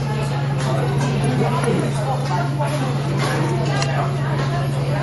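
Everyday sounds with plainly audible MP3 compression throughout, likely from a low bitrate near 48 kbps. Treble stops sharply at 11.5 kHz, and weak detail swirls watery.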